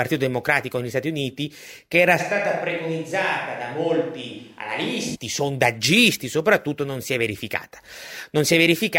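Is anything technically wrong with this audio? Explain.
Yes. From 2.21 to 5.14 s the speech abruptly turns hollow, roomy and bass-light, about 5 dB quieter and noisier. This is likely a switch to a distant microphone rather than added reverb.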